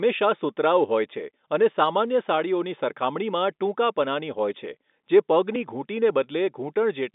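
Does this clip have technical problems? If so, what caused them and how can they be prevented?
No, nothing stood out as a technical problem on listening to this speech recording, so there is nothing to prevent.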